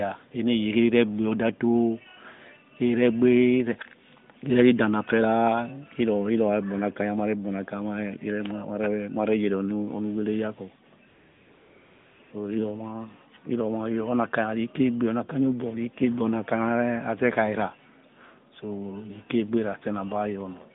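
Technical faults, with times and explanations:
11.08 to 12.20 s and 12.22 to 12.32 s, AMR comfort noise: the phone treated the talker as silent and stopped sending speech frames, for 1.12 s and then again for 0.1 s after a brief 20 ms gap. The receiver filled both gaps with synthetic noise built from a rough level and spectrum estimate. The real background is replaced by a smooth, steady hiss that switches in and out, and it sits inside the narrowband line's 150 Hz to 3.7 kHz band.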